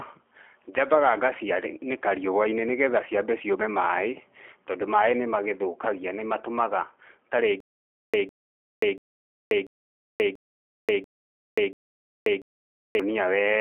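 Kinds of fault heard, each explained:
G.729 codec: The speech sounds narrow and boxy, with nothing above 3.5 kHz, and has a slightly rough, synthetic edge. The cause is coding at 8 kbit/s, where each 10 ms frame is rebuilt from a vocal tract filter, a pitch predictor and a few pulses.
Stutter with silent gaps: From 7.60 to 13.00 s the same 155 ms burst returns seven times, each followed by 533 ms of dead digital silence, a steady 688 ms cycle. The likely cause is a stalled stream replaying its last fragment, then running empty.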